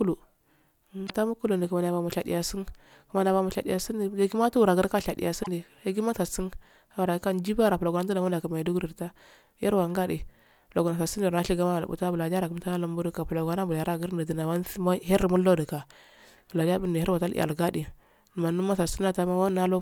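At 1.03 to 1.10 s, just before "mukulu di", and again at 5.40 to 5.48 s, the speech breaks into a short garbled blip of about 70 and 80 ms. Both are damaged data in a compressed stream: corrupted bytes make the decoder misread those frames and lose sync until it finds the next valid frame header.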